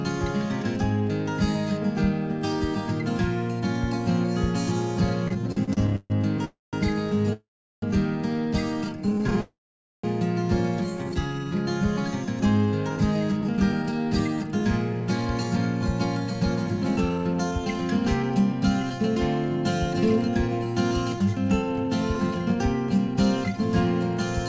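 The audio passes through a WebRTC call path, with nothing above 8 kHz on a spectrogram, which fits the G.722 codec. It has a cluster of timing faults.

Repeated stalls (stutter) run from 5.28 to 6.41 s, where about a dozen brief holds stretch the last sound and fill roughly a third of that span, the longest lasting 142 ms. A shorter burst from 9.06 to 9.39 s has holds no longer than 20 ms. On a waveform these show as small repeated or smeared patches breaking the envelope.

Three call audio freezes follow, at 6.45–6.75 s, 7.33–7.84 s and 9.41–10.06 s. Each carries a fading buzz into silence, and the silent parts last 180, 380 and 500 ms, seen as flat gaps in the waveform. The audio then resumes where it stopped, most likely because packets were held up and the jitter buffer ran dry.

Jitter buffer slow-down stretches 8.85–9.24 s to 86 % speed and 10.9–11.59 s to 83 %, adding 65 and 126 ms while the pitch stays the same. 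A spectrogram shows drawn-out harmonics with unchanged spacing.

From 12.89 to 23.61 s, jitter buffer speed-up plays the audio at 106 %, trimming well over half a second in total. Events arrive slightly early, and the spectrogram looks horizontally compressed without any rise in pitch.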